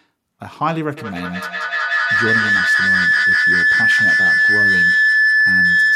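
From 0.97 to 5.95 s, a speaker-to-microphone loop gains level: feedback howl near 2 kHz, about 11 dB above speech, growing where echo fades.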